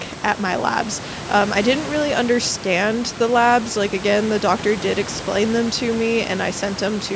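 No technical faults occur at any point in this speech, so there is nothing to describe in time order.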